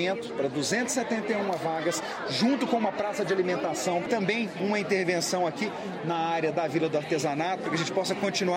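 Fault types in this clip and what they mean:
No technical faults can be heard: the signal stays continuous, with no dropouts, distortion, added noise or timing irregularities anywhere in the audio.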